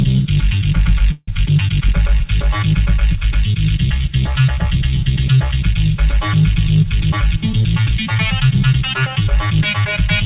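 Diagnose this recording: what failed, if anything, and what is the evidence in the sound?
Call audio freeze at the network and jitter buffer: from 1.12 to 1.29 s, 154 ms of decaying fill and then 30 ms of silence, likely delayed packets emptying the buffer.

Jitter buffer speed-up in call processing: from 7.10 to 9.07 s the audio runs hurried at 108% speed with unchanged pitch, as the receiver trimmed about 150 ms of pitch periods.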